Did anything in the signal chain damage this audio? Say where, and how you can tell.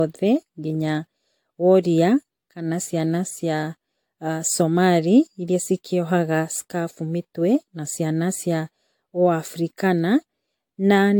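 Yes, at the codec stage, throughout the speech: the sound is swirly, smeared and hollow, attacks are blurred, and nothing remains above 18.6 kHz. This is likely generation loss, with audio re-encoded about four times at what sounds like 96 kbit/s AAC-LC, each pass adding fresh quantisation noise and spectral holes.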